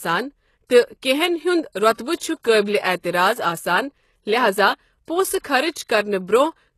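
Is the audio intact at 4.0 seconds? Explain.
No. At 4.0 seconds, as throughout the clip, the speech has plainly audible damage, likely from HE-AAC compression. Nothing is present above 12.3 kHz. The treble is rebuilt from copied lower bands, so s sounds turn gritty and metallic. This fits a very low bitrate, around 16 kbps.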